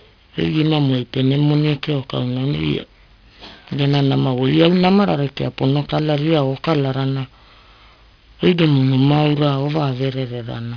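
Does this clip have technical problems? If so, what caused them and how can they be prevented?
Yes, aliasing throughout: sibilants sound gritty, with content above 5.5 kHz folding back down, which points to downsampling to 11 kHz without an anti-alias filter. Prevent it by low-pass filtering below half the target rate before resampling.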